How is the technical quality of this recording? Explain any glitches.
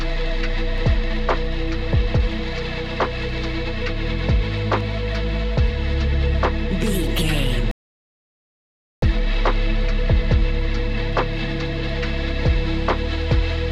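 There are two kinds of glitch here, a pair of clicks and one noticeable pause.

At 0.78 s and again at 4.81 s you get a single sharp click, most likely from dropped samples. A tiny sliver of the stream, well under a millisecond, goes missing, so the waveform jumps straight to a later value. It's too brief to lose any sound, just a tick.

Then at 7.71 s there's a rebuffering stall. The player ran dry of downloaded audio and went silent until more arrived, picking back up at 9.02 s exactly where it left off. Nothing is missing, but about 1.3 s of dead air is added.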